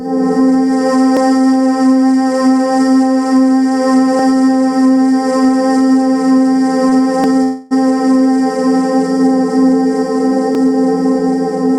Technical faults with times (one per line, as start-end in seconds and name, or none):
0.00-11.79 gain pumping
1.17-10.55 clock drift buffer slips
6.89-6.93 short stall from a late packet
7.43-7.73 call audio freeze